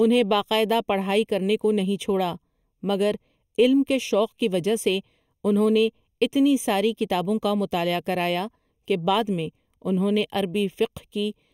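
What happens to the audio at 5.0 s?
Channel delay (comb filtering) is present at 5.0 s, as it is across the whole clip. One channel trails the other by about a third of a millisecond, so summing them cancels evenly spaced frequencies from around 1.5 kHz upward, leaving the speech hollow and phasey.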